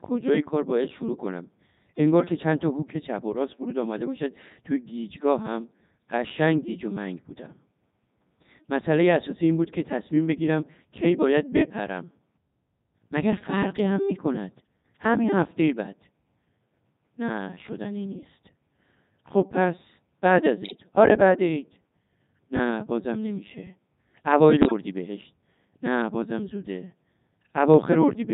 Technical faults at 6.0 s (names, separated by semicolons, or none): Codec 2 vocoder